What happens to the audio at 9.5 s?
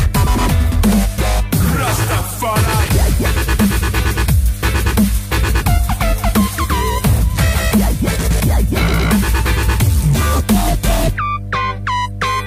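At 9.5 s the sound sits on a steady mains hum, though nothing changes at that moment: the hum runs unbroken from the start of the clip to the end. A ground loop or nearby transformer is leaking the 50 Hz power line into the signal, giving a fixed low tone with some low harmonics, loud at roughly 10 dB below the audio. Unlike rumble, which wanders and spreads across low frequencies, this hum holds one exact pitch.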